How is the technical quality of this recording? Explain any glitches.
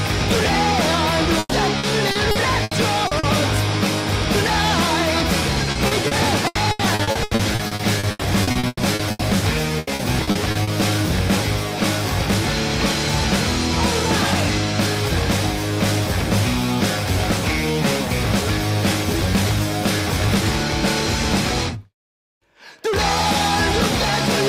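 The recording is marred by three bursts of repeated packet loss (robotic sound), from 1.39 to 3.26 s, 5.71 to 9.22 s, and 9.79 to 10.70 s. Packets kept going missing in quick succession, and each hole was patched by stretching the preceding sound, with the longest patch reaching 120 ms. Roughly a fifth to a third of each stretch is filled this way, so the audio turns choppy, with fragments dropping out.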